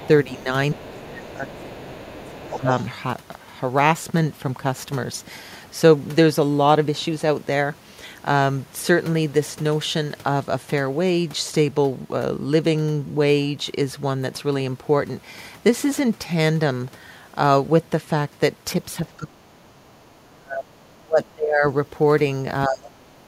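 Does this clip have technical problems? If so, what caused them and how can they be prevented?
Yes. A second, quieter voice, the other side's voice leaking through, sits under the speech from 0.0 to 2.85 s, roughly 20 dB below it. A much fainter scrap appears again from 18.91 to 19.16 s. The likely cause is the talker's loudspeaker feeding the far end back into the microphone, with the echo canceller failing to remove it all. Using a headset, or lowering loudspeaker volume, prevents this leak.

The speech itself is pushed down when both sides talk at once. This speech suppressed in double talk runs from 0.25 to 2.68 s, dipping by about 15 dB over some two seconds. From 19.18 to 21.64 s it drops much deeper, near 30 dB. From 22.67 to 23.27 s it sinks by about 25 dB. The canceller likely cannot tell the talker from the echo, so it turns both down. A headset or a better full-duplex echo canceller avoids this.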